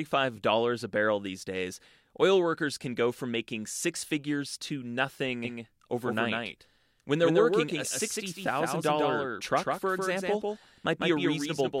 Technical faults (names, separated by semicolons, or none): doubled audio track